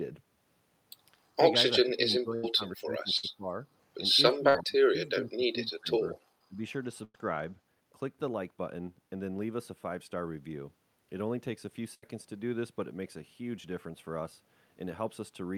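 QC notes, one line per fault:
1.81 to 3.67 s, speech suppressed in double talk: the voice sinks by roughly 20 dB in places and loses pieces across about a second and a half of this span, likely because an echo canceller heard both sides at once and could not tell this talker from loudspeaker echo, so it pulled everything down. Unlike packet loss, nothing is held or repeated; the speech simply thins, dulls or drops.
4.35 to 6.15 s, speech suppressed in double talk: the same ducking returns, deeper here at roughly 25 dB, again over about a second and a half of patchy dips and cut-outs while the far side would be talking. The level falls and recovers without any buzz or frozen tone of its own, which separates it from a concealed gap.
6.48 to 6.60 s, speech suppressed in double talk: a brief dip of roughly 20 dB lasting about 100 ms, the shortest of these, where the suppressor likely clamps down for a moment and lets go. 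It sounds like a momentary fade rather than a stutter, with no stretched sound filling the hole and no skip in time afterwards, so it reads as level gating, not missing audio.
2.35 to 2.45, 3.17 to 3.25, 4.49 to 4.56, 7.04 to 7.16 and 11.94 to 12.04 s, burst of packet loss: gaps of 78, 58, 54, 96 and 81 ms where the receiver stretched the last sound it had, fading it as it went, so a voiced stretch turns into a short held buzz and breathier sounds into a dying hiss. Speech then picks up further along with that slice gone, a jump forward that distinguishes it from the suppressor's dips.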